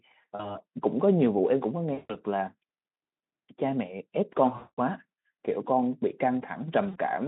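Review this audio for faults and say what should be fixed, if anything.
VoIP packet loss concealed by the speech codec occurs at 0.36–0.58 s, 1.93–2.17 s, 4.57–4.79 s and 6.89–6.98 s. The Speex decoder, at what sounds like about 15 kbps, repeats its last pitch and filter through gaps of 40, 160, 200 and 60 ms, which fits runs of 20 ms frames. Each gap becomes a stretched, fading smear that stays weak after packets resume. A spectrogram shows flat, repeated harmonics decaying in level, and the waveform shows an envelope tapering into periodic cycles. Prevent it with a larger jitter buffer, forward error correction or redundant packets on the link.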